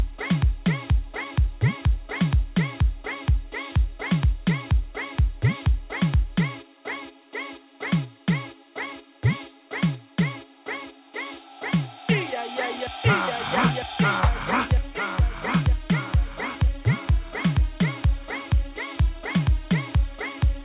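No technical faults are audible anywhere in this audio.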